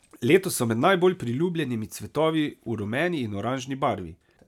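Speech, with no technical fault audible anywhere in the recording. The signal runs without dropouts, clicks, distortion or level jumps.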